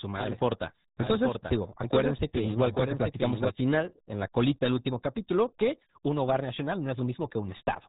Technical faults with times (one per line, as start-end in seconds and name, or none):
0.00-7.88 RealAudio 14.4 codec
1.00-3.50 doubled audio track